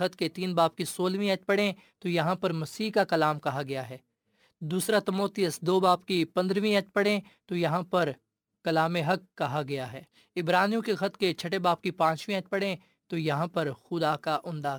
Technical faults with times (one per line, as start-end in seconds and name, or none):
0.00-14.79 crude rate conversion